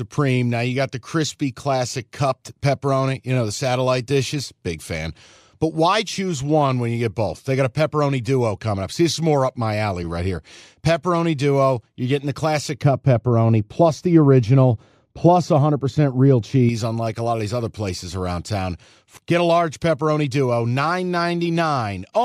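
From 12.82 to 16.69 s, de-emphasis was applied wrongly: a treble-cut stage meant to reverse pre-emphasis acted on speech that either had no pre-emphasis or had already been de-emphasized once, so it removed high end that belonged in the signal. The response falls away smoothly above the midrange, sitting about 11 dB lower at 10 kHz than at 1 kHz. The speech turns dull and muffled, with softened consonants, until clarity returns just before "unlike a lot of".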